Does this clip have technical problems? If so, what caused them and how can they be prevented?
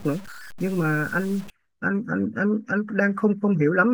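Yes. From 0.0 to 1.5 s the speech turns grainy. The grit rises and falls with the signal, and the quietest parts sputter or drop out. This is likely low bit depth without dither. The level steps sound coarse, which fits about 6 bits, with values truncated rather than rounded. The error tracks the speech, sitting roughly 25 dB below it. To prevent it, keep enough bit depth and apply dither before any reduction.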